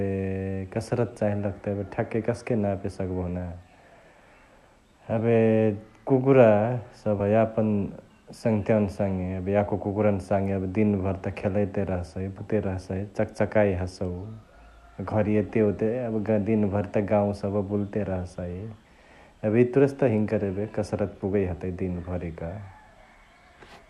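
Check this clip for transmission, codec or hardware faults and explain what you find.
Two faults turn up in this speech clip, both compressed frames skipped. At 7.19 s and 12.37 s, whole 24 ms frames go missing. About 70 ms and 150 ms of audio vanish. Each time the speech jumps ahead by the missing stretch.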